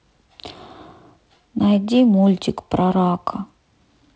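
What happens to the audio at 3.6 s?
At 3.6 s the speech carries on intact, with only the light upper-band hiss and slightly noisier lower band of G.722 wideband telephone coding at 48 kbit/s and no fault at that moment.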